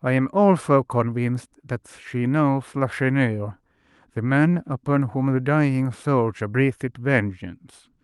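Nothing here counts as a fault: the speech comes across the way a normal call link over Opus would carry it, with just the ordinary coding character you'd expect from that path and no faults to point to.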